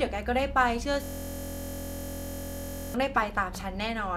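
A speech recording where, from 1.04 s to 2.94 s, the voice abruptly gives way to a steady, rasping buzz pitched at about 43.1 Hz, made of one 23.22 ms fragment repeating around eighty times. This is a system hang loop: the computer or audio driver stalled while the sound hardware kept replaying the same small ring buffer, and a loop that short, which fits a 1024-sample buffer, fuses into a tone rather than a stutter.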